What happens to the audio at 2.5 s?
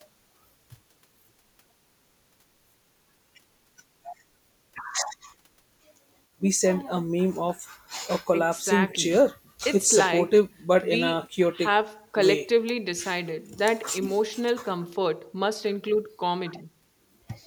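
Nothing goes wrong at 2.5 s: the speech there plays through intact, with no dropout, click, distortion or other fault.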